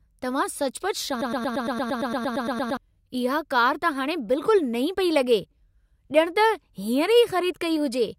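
A speech recording with a broken-record loop from 1.21 s to 2.77 s: a fragment of about 0.11 s repeats identically 14 times, back to back, and the speech that belonged in that stretch never plays. The likely cause is a stalled player, encoder or stream resending its last held fragment. An echo or delay would decay and overlap the ongoing speech. Here every repeat is exact, equally loud and abruptly joined, and the audio that should have played in that stretch is lost.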